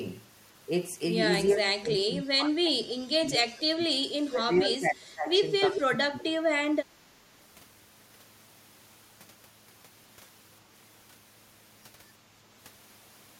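A speech recording with speech suppressed in double talk from 1.53–4.07, 4.28–5.46, 5.68–6.49 and 6.76–6.80 s, the waveform sagging up to about 25 dB as an echo canceller, likely confused by simultaneous talkers, ducks both its own talker and the echo. An echo leak at 5.74–5.81 s shows as a repeated trace 381 ms behind the speech, about 5 dB down, likely uncancelled loudspeaker pickup.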